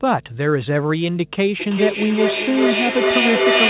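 Mains hum runs from the first instant to the end: a steady 50 Hz tone about 25 dB below the speech, most likely from a ground loop or nearby transformer. On a spectrogram it is an unbroken horizontal line at 50 Hz, with some low harmonics above it.

From 1.6 s to the end, a feedback echo between two devices takes over. One device replays the other's microphone feed into the same room, and that microphone sends it back again. Each syllable returns roughly every 400 ms, thinner and more ringing each pass. The repeats build up instead of dying away and peak about 3 dB louder than the speech. A spectrogram shows stacked, evenly spaced copies of each syllable, smeared below the 4 kHz ceiling of the call path. The waveform's envelope swells instead of decaying.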